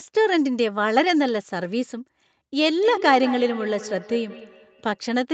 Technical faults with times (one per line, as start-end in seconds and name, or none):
2.83-5.03 feedback echo between two devices